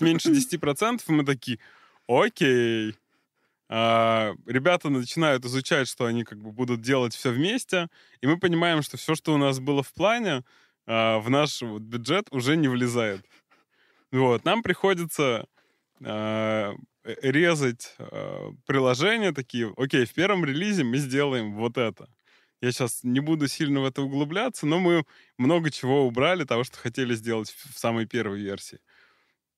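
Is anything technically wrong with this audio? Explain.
No, nothing technically wrong is audible in this speech recording.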